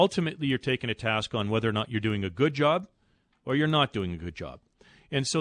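The resampler restarted on every block, treating each 100 ms stretch as if nothing came before or after it, which fits a conversion from 48 kHz to 24 kHz. Each block edge carries a small error, heard throughout as a steady tick at 10 Hz under the speech.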